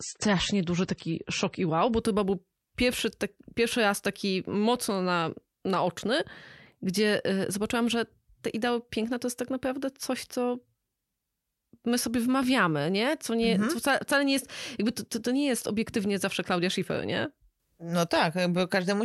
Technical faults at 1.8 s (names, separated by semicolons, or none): adaptive stream starting at a low bitrate